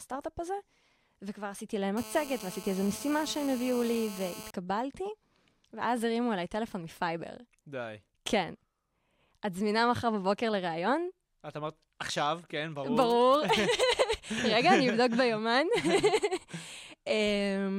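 From 1.97 s to 4.51 s a GSM phone buzz sits under the speech: a hard, raspy drone at about 217 Hz, about 16 dB below the talker. A nearby 2G handset in a call was pulsing its transmitter 217 times a second, and the audio circuitry rectified those radio bursts into sound. On a spectrogram it shows as a steady comb of harmonic lines stacked from 217 Hz upward, unaffected by the speech. The waveform carries a regular train of square-edged pulses.

At 13.01 s to 13.83 s GSM signalling bursts appear as a galloping dit-dit-dit of brief 217 Hz buzzes, roughly 15 dB under the speech. This time the handset was sending only short clusters of radio bursts, the pattern a phone uses while it talks to the network rather than carrying a call, and these were demodulated the same way. A spectrogram shows short vertical blocks of the same harmonic comb separated by gaps, and the waveform shows clumped pulse packets.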